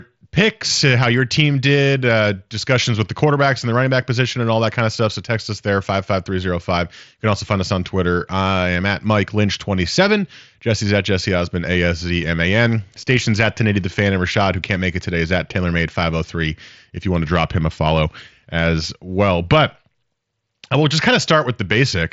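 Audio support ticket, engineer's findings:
Nothing to flag here, just speech coming through a Bluetooth mSBC headset link with its usual wideband ceiling, top end running out around 7.7 kHz.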